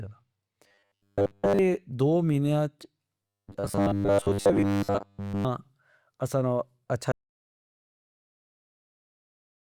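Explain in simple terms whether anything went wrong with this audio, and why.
From 0.68 to 1.59 s, and again from 3.27 to 5.45 s, the speech turns into a stiff, metallic buzz at a steady 100 Hz. This is robotic sound from repeated short buffers. The likely cause is that new audio arrived too slowly, so the system kept replaying the last tiny slice, about 10 ms long, and skipped real speech. The first stretch is entirely repeats, and the second is mostly repeats.

From 7.12 s to the very end, the sound cuts out to total silence, with not even background hiss left. This is an audio dropout to silence. The input was likely lost, through a disconnection or an accidental mute, while recording continued writing nothing.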